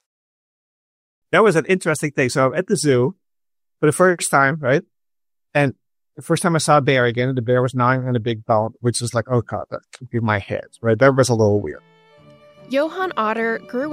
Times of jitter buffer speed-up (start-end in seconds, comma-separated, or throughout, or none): none